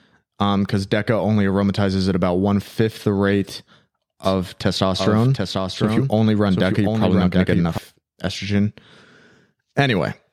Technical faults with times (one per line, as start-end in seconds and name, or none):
4.24-7.78 doubled audio track